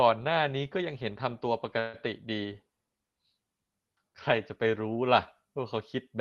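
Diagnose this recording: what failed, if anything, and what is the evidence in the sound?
At the network and jitter-buffer stage, packets were most likely held up in transit and the buffer ran dry from 1.79 to 1.96 s. That is a call audio freeze: the receiver stretches the last sound into a fading buzz or hiss for about 141 ms. When the packets arrive, the speech resumes where it stopped. Nothing is lost, but everything after that point plays about 141 ms late. The top end stays capped near 12 kHz throughout.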